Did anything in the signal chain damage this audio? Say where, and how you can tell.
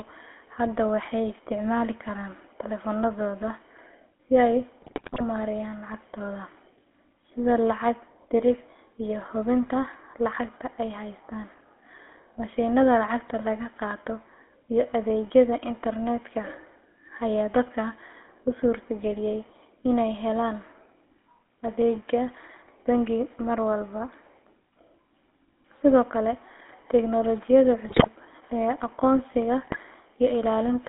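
Yes. Throughout, the speech sounds buzzy and gravelly, confined to roughly 250 Hz to 3.4 kHz. This is GSM full-rate codec damage: pulse-excited vocal-tract modelling that fits a 13 kbps voice channel.

GSM bit errors cause squawks and gargling at 4.82–5.21 s (after "si ay", before "maareeyaan lacagtooda"), 27.88–28.07 s (after "kale tiknoolajiyada") and 29.62–29.77 s. Corrupted filter, pitch and gain values distort those frames.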